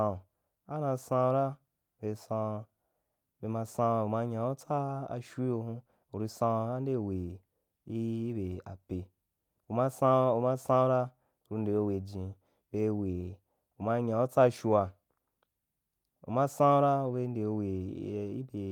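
No technical faults can be heard anywhere in the recording; the signal stays continuous and stable throughout.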